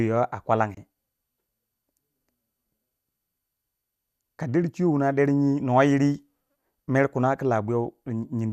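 At 0.75 s, a digital broadcast dropout mutes the speech until 0.78 s. The receiver likely discarded a corrupted frame and went silent, losing about 24 ms, which points to a single frame. It is heard as a brief gap, seen as a narrow blank vertical band on the spectrogram and a flat line in the waveform.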